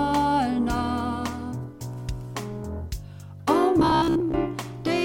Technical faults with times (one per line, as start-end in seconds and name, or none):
3.80-4.35 robotic sound from repeated short buffers